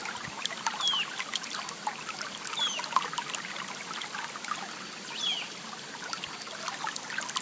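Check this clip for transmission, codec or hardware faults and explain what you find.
No transmission, codec or hardware faults are audible.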